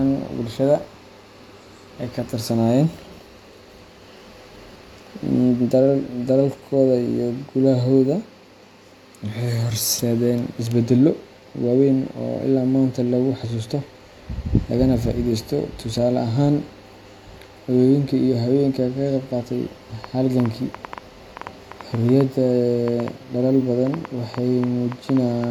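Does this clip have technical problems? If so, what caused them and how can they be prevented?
Yes. There's a train of clicks from 20.04 s to 25.45 s, about five a second at an uneven pace, roughly thirty of them, poking a bit above the speech and into the pauses. Likely cause: nearby equipment interference or a faulty connection or power supply. Keep gear apart and check connections.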